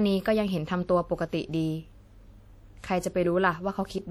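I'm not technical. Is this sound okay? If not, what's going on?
No. From start to finish, the speech has a ringing, washy quality. A hiss swells and fades along with the voice. This is plainly audible, not subtle. The likely cause is WMA compression, a way of shrinking audio files. It cuts the sound into long blocks and stores each one roughly. The errors smear across each block, which creates the wash. Quieter details get thrown away, which adds the ringing.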